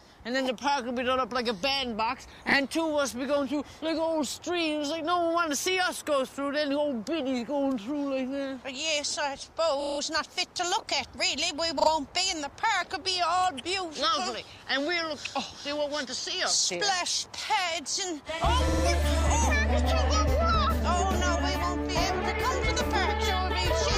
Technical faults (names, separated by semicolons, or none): repeated frames